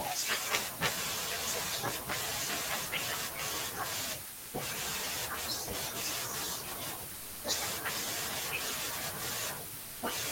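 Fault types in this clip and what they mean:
Sound dropped by the voice detector at 4.33–4.53 s, 7.15–7.43 s and 9.81–10.01 s: speech gives way to steady noise for 200 ms, 280 ms and 200 ms, likely because the sender's voice detector judged it background and stopped sending, so comfort noise filled the gap.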